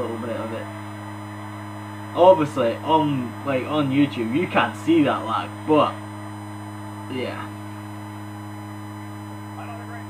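A USB whine runs throughout: a fixed 1 kHz tone, roughly 25 dB below the sound, from 1 ms bus frames leaking through power or ground, a flat spectrogram line.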